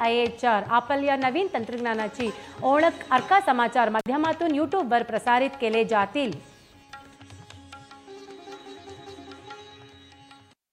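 At 3.99 s to 4.06 s the sound breaks off in an intermittent contact fault: a loose plug or cable connection opens for about 52 ms, then closes again. What marks it as a physical contact problem rather than a digital dropout is the ragged crackle where the connection breaks and remakes, and the faint hiss that continues through the gap. A dropped buffer or lost packet would instead leave a clean, silent hole with abrupt edges.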